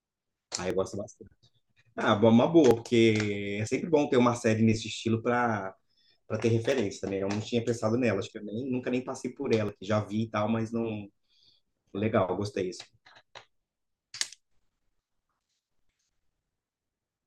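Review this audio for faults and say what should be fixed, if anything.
You'll hear six small jumps forward in the speech at 0.70, 2.71, 3.67, 6.72, 9.69 and 14.23 s. Each skips roughly 20 ms, except the one at 9.69 s, which loses about 40 ms. That's likely a dropped buffer (overrun): capture fell behind, the hardware overwrote unread audio, and the two sides got spliced together. To stop it, give the capture thread higher priority or use larger buffers so it can keep up.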